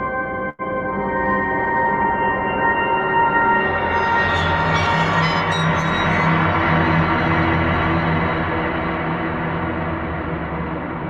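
At 0.49–0.62 s, a short stall from a late packet: the emptied jitter buffer holds the preceding sound 94 ms, shown as frozen spectrogram bands.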